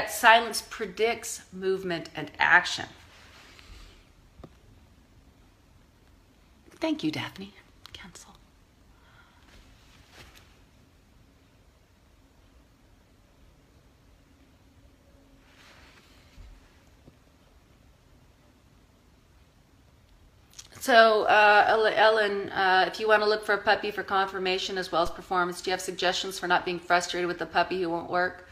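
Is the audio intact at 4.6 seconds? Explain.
Yes, the audio is intact at 4.6 seconds, with no dropout, click, distortion or other fault audible at that point.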